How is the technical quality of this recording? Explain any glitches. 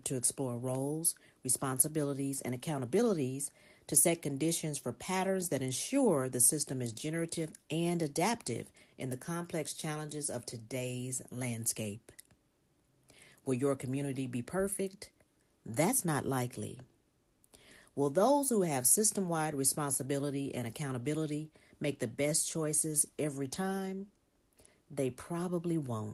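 No technical glitches can be heard anywhere in this recording, and the signal stays continuous and intact throughout.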